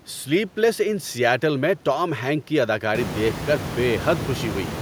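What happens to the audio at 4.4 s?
At 4.4 s the audio is intact, with only the room's own background noise audible about 9 dB below the speech.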